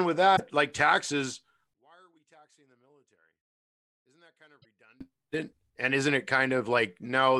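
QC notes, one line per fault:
0.33–0.40 s, damaged data in a compressed stream: a short glitch lands just before "like taxes". The bytes in this stretch were bad, so the decoder could not read the frames there. It lost sync and scanned ahead for the next valid frame header. That produces the 70 ms blip instead of a clean continuation.
1.74–5.01 s, one channel inverted: starting right after "like taxes", the summed level falls by about 34 dB. The centred speech almost disappears, leaving only a faint residue of the difference between the channels. The likely cause is reversed polarity on one stereo channel. The content common to both sides cancels in the mono sum, so the speech nearly vanishes for the whole span.
4.59–4.65 s, damaged data in a compressed stream: a second brief blip occurs inside the cancelled section. It again marks frames the decoder could not parse. The decoder dropped them and resynchronised at the next header, over a 64 ms stretch.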